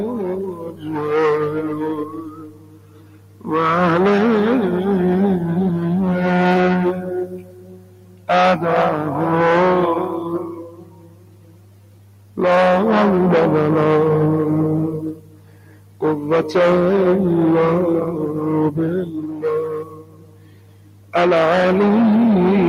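Hard clipping runs throughout: the signal is driven about 16 dB past what the chain can pass, so roughly a fifth of the samples are flattened, giving a harsh fuzz on every loud moment. A noise suppressor applied to music or sounds is also active for the whole clip, treating sustained and decaying material as noise; its gain swings by around 20 dB, so the audio pumps and thins. The sound is cut by the noise suppressor at 0.07 to 1.06 s, 1.49 to 3.49 s, 6.93 to 8.29 s, 10.43 to 12.38 s, 15.13 to 16.02 s, 19.05 to 19.44 s and 19.66 to 21.14 s. Held and fading sound sinks by up to about 15 dB, and by about 11 dB in the 19.05 s event.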